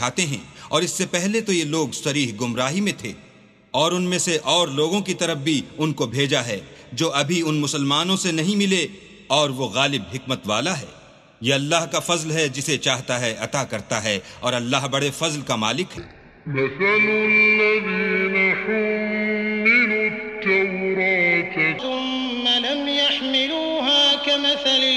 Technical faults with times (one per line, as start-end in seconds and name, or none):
15.97-21.79 wrong sample rate